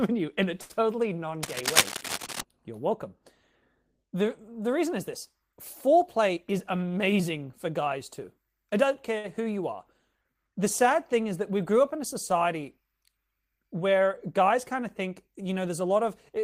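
At 0.61 s, just after "you in a", a short stall from a late packet holds the last sound for 82 ms. On a spectrogram it shows as a frozen, smeared harmonic stretch. From 1.43 to 2.41 s, cable scratch noise, likely from a worn connector or cable being moved, adds rasping bursts at about the speech level. These appear as dense broadband specks and jagged spikes on the waveform. From 6.36 to 7.20 s, just before "for guys too I", a jitter buffer speed-up removes roughly a tenth of a second of pitch periods, so the speech runs at 109% and sounds hurried at unchanged pitch. The spectrogram shows harmonic stripes at normal spacing but compressed in time. At 9.18 s, between "guys too I don't" and "who you are", another late-packet stall holds a sound for 57 ms. From 15.69 to 16.39 s, a milder speed-up at 105% trims about 40 ms.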